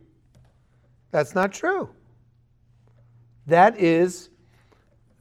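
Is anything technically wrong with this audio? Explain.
Yes. At 1.43 s there is a block of digital silence: for about 1.45 ms the signal drops to silence and then resumes, with no fade on either side. The length fits a 64-sample buffer that was not filled in time and went out empty. At this length it is heard as a tick or dip, not a hole. An isolated click from one bad sample would be a lone spike, while this brief flat gap is bounded by two abrupt edges.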